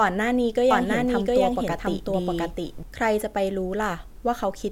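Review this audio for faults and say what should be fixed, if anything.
A second capture of the same source, likely through a slower path or from an edit holding two copies out of step, produced a doubled audio track from 0.71 to 2.83 s. The speech is joined by a full-band copy trailing by roughly 0.7 s at about the same level. The copy has no decay or room colour, and it starts and stops abruptly. To prevent this, feed each source into the recording through only one path, and check edits for overlapping duplicate regions before export.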